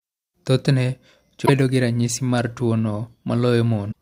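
At 1.43 to 1.50 s, just before "bedo gi ranyisi mar", and again at 3.88 to 3.94 s, there's damaged data in the compressed stream: the decoder loses frame sync and spits out a short glitch, a chirp, squawk, click or brief hole.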